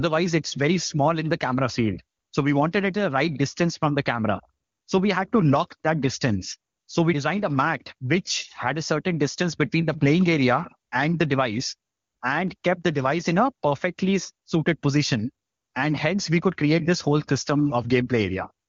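No faults are audible anywhere in the speech.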